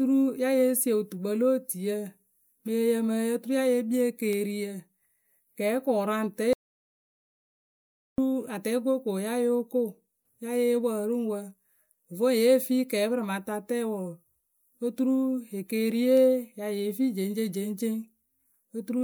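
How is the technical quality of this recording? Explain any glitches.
The speech recording has one glitch. An audio dropout to silence runs from 6.53 to 8.18 s, most likely because the input was lost while the recorder kept writing zeros. The sound cuts to dead silence with no room tone for about 1.65 s, and whatever was said then is gone.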